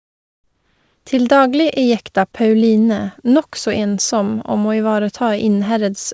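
A speech clip. From 0.00 to 1.06 s there is comfort noise in place of the background: a steady, featureless hiss, about 6 dB quieter than the real background. The likely cause is discontinuous transmission. The sender stopped sending during the quiet start, and the receiver filled the gap with synthetic noise. Nothing is heard above 8 kHz, which fits a wideband call codec.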